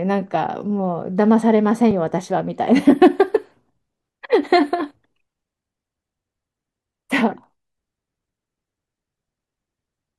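Twice a block of samples was zeroed, a block of digital silence: 3.4 ms at 1.91 s and 1.3 ms at 7.44 s, the latter fitting a 64-sample block. Each gap is far too short to be heard as silence, so it is heard as a brief tick or dip.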